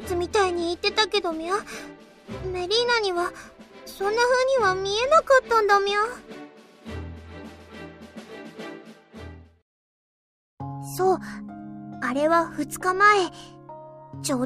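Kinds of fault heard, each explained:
No technical faults can be heard anywhere in the audio. Nothing in it points to any problem in how the sound was captured, processed or carried.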